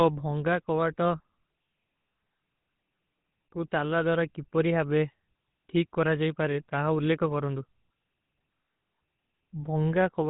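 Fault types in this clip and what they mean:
GSM full-rate codec: The speech carries a buzzy, gravelly roughness across the whole clip, plainly audible, with a dull band-limited quality because nothing above 4 kHz gets through. The cause is the early GSM full-rate coder, whose damage fits its 13 kbps rate: it reduces the voice to a vocal-tract filter fed by evenly spaced pulses and discards two of every three excitation samples, leaving a coarse, grainy texture.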